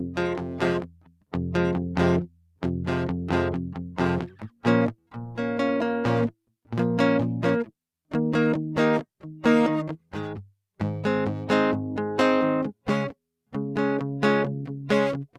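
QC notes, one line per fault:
Throughout: noise suppressor applied to music, a speech-tuned processor treating held tones and ambience as noise, so level swings by about 5 dB and pumps.
0.83–1.33 s, 2.27–2.62 s, 4.27–4.64 s, 9.97–10.13 s: sound cut by the noise suppressor, sustained material misread as noise and pulled down as much as about 12 dB, decays shortened.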